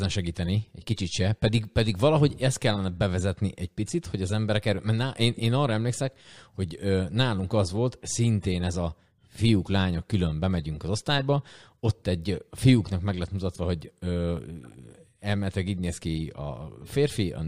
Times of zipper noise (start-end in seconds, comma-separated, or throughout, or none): none